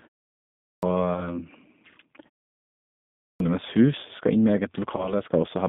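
The whole clip carries G.729 codec damage. The speech is narrowed to a telephone band of roughly 150 Hz to 3.7 kHz. Each frame is rebuilt from a filter, a pitch predictor and a few pulses. The result sounds rough and synthetic, which fits an 8 kbit/s G.729A coder.

At 0.56 s, the first sound after a pause has a clipped start. The output device had gone idle in the silence and took time to wake. About 269 ms is swallowed, so the sound begins abruptly, missing its onset.

From 1.14 to 1.37 s comes VoIP packet loss concealed by the speech codec. About 20 ms is missing, which fits a single lost packet. The decoder stretches its last pitch and filter into a buzzy tone or coloured noise that fades. The voice stays weak for a while after.

At 3.16 s, another clipped start follows a pause of nearly a second. About 242 ms is lost before the device is ready. Again the sound cuts in suddenly.

From 4.97 to 5.14 s, a second concealed packet loss occurs. 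Again about 20 ms is missing. The gap is bridged by a brief extrapolation that fades, and the distortion lingers into the following frames.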